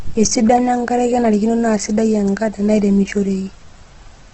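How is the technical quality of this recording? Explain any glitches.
The quality is poor, with heavy codec damage across the whole recording. Opus compression, likely the cause, runs throughout: nothing remains above about 8.2 kHz, and the low bitrate (around 12 kbps, in music mode) leaves bands refilled with folded or noise content, so the speech sounds rough, grainy and dull.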